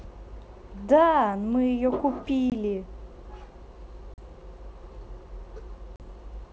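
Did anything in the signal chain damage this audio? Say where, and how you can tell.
Yes. Network packet loss on an ADPCM call leaves hard-edged silent holes at 2.50–2.52 s (20 ms), 4.14–4.19 s and 5.96–6.01 s (40 ms each). Afterward the decoder's predictor and step size mismatch the sender's, so speech resumes with a click, distortion or wrong level, then settles.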